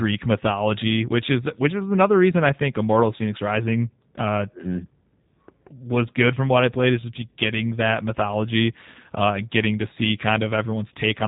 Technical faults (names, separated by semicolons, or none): G.729 codec